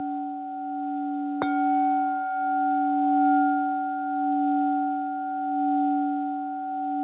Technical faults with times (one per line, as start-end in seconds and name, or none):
none